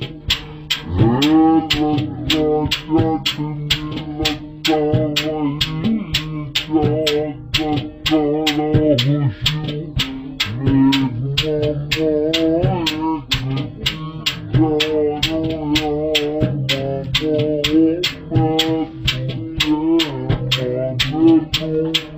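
Throughout the clip, the stereo is read as mono: left and right samples, interleaved, are taken in sequence as one channel. Playback therefore runs at 0.5x speed and an octave (12 semitones) low, with a fainter mirrored image in the upper spectrum.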